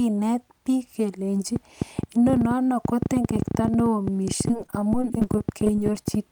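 A train of clicks runs from 1.56 s to the end: irregularly spaced pops, about 10.8 per second, peaking around 15 dB above the speech and audible in pauses too. The repeated, similar pulses are likely interference from nearby equipment or a faulty connection or power supply.

Repeated packet loss (robotic sound) overlaps it from 4.48 s to 6.06 s. Data went missing again and again, each hole, none longer than 20 ms, patched by extending the preceding sound. About 16% of the stretch is filled this way, leaving the speech choppy with pieces missing.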